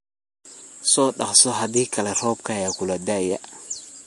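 Throughout the speech, nothing is present above 11.3 kHz, and the sound has a watery, swirling texture with smeared consonant attacks. These are plainly audible MP3 compression artefacts, most likely from a low bitrate around 48 kbps, which drops treble and toggles weak frequency components between frames.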